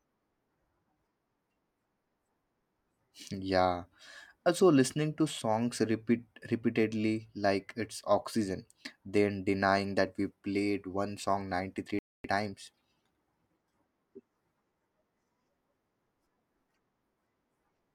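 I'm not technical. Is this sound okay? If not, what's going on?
No. At 11.99 s the speech suddenly drops to silence for about a quarter of a second, then picks up again at 12.24 s. This is a playback stall: the player likely ran short of incoming data or was briefly held up, so the sound paused until it recovered.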